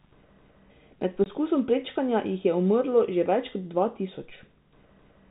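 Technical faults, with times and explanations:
1.24–1.26 s packet loss filled with silence: a 20 ms hard-edged hole, fitting one lost packet replaced by silence rather than smoothed over.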